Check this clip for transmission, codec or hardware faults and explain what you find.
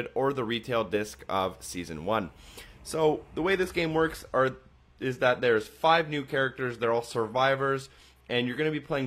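One fault is present: a drop to a lower-bitrate adaptive stream. From 3.37 s to the end of the clip, the stream abruptly switches to a lower-bitrate version, as adaptive players do when the connection slows. There is no gap; the quality simply falls. The top end now stops at 14.9 kHz, and the treble takes on a synthetic, smeared quality with more codec artefacts. That points to a move from roughly 96 kbit/s AAC to a 24 kbit/s HE-AAC stream, which rebuilds high frequencies instead of coding them.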